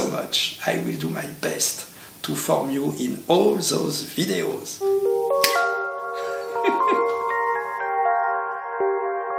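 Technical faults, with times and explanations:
Nothing technical gets in the way here: the audio runs along steadily with no glitches or dropouts to point to.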